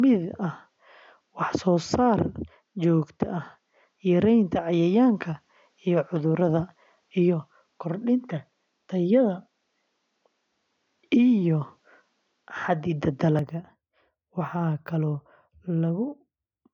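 Input switched to a poorer device, from the start to 13.39 s: for this stretch the speech has nothing above 7.6 kHz, sits roughly 5 dB off its later level, and carries a faint noise floor around 50 dB down. At 13.39 s the top end opens up with no gap. That pattern likely comes from the system capturing through a narrower-band microphone first, then changing to a better input mid-recording, so the early speech sounds duller and boxier.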